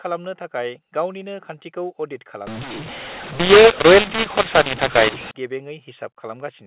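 Right after "गावनिनो खान्थिखौ अडिट", from 2.47 to 5.31 s, mu-law and A-law get mixed up: mu-law telephone audio is decoded as A-law, so levels scramble, the sound turns harsh, and pauses fill with hiss.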